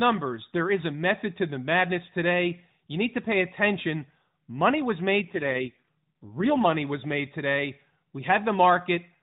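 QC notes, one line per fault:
5.22–6.67 s, AMR rate drop: The speech turns buzzier and more synthetic for about 1.5 s, ending just before "was made today". The narrowband AMR codec is fed fewer bits, which fits a fall from 12.2 to 4.75 kbps, so pulse detail thins. Bandwidth and continuity hold.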